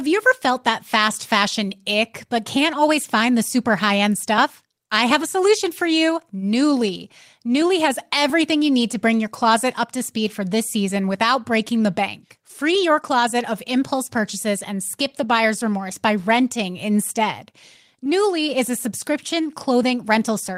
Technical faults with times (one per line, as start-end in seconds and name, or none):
none